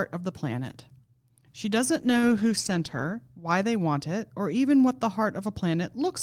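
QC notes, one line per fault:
1.98–3.23 s, call bitrate drop: speech turns coarse and muffled as the encoder starves for bits, which fits a fall from 32 to roughly 13 kbps.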